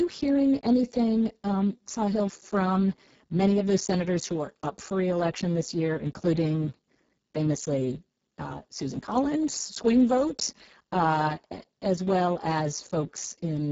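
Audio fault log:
throughout Speex codec: speech sounds hoarse and noisy, because the very low setting, which fits roughly 6 kbps, leaves too few bits for the excitation. A spectrogram shows blurred harmonics, noise-like fill above 4 kHz, and a sharp ceiling at 7.7 kHz.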